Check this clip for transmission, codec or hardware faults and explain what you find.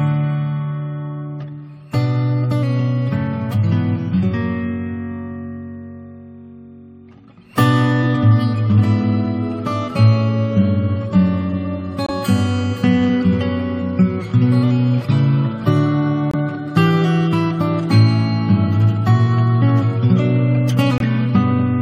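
Three short dropouts point to a corrupt frame muted fault, heard at 12.06–12.11 s, 16.31–16.35 s and 20.98–21.06 s. Damaged compressed frames failed to decode, and the player filled their slots with silence. The holes of about 40 ms, 40 ms and 80 ms fit one, two and three frames. Each begins with a sudden, hard cut, not a fade or smeared concealment, and the sound resumes on schedule, with no skip or stretch as a buffer underrun would cause.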